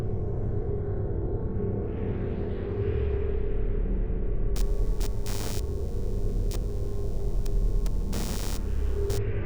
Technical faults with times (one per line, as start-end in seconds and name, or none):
4.56-9.18 computer activity noise